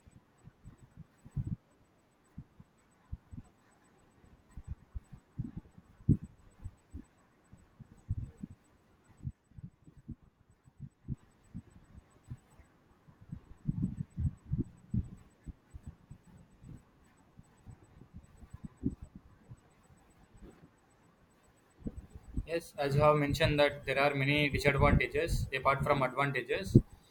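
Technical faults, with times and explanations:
9.24–11.15 s: sudden gain jump. Speech and background noise step down together by about 6 dB and later step back up, likely from a gain change applied without a ramp, not a gradual fade.
22.59–22.78 s: sudden gain jump. A brief 0.19 s drop of about 6 dB hits speech and noise equally and instantly, likely the same unramped gain step, not compression acting on speech alone.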